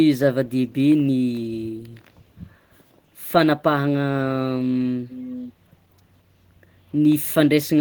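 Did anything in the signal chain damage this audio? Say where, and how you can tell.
Yes. At the call-processing stage, the far end's echo canceller likely failed to remove what its microphone picked up from the loudspeaker, causing an echo leak. From 5.09 to 5.53 s, a faint copy of the speech returns 439 ms late, about 15 dB below the direct sound.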